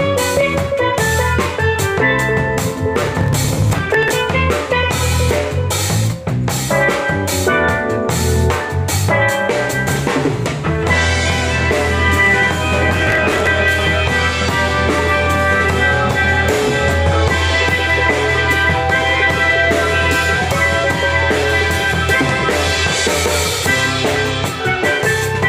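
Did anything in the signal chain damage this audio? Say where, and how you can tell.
Yes, processor overload crackle at the driver or buffer stage, from 2.96 to 4.10 s and 12.82 to 13.47 s. Dozens of very short buffers, around 1.5 ms each, were skipped in quick succession, leaving gritty tearing. The crackle comes in dense bursts that stop cleanly, unlike a single isolated dropout or steady clock-drift clicks.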